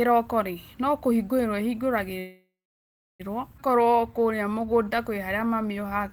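Call audio freeze at 2.19–3.22 s in this speech recording: the last sound stretches into a fading buzz, then silence for about 0.67 s, likely from held-up packets. Speech then resumes intact. Skip ahead at 3.58–3.60 s: roughly 0.7 s of speech is dropped to clear the backlog, and the two sides are joined with only a 5 ms fill. Jitter buffer slow-down from 3.73 s to the end: repeated pitch periods add 234 ms, so speech runs at 90% speed with unchanged pitch and drawn-out sounds.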